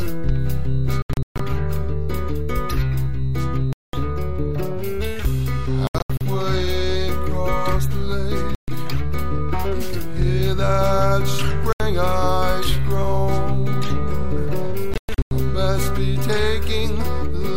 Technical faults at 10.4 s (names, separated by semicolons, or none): none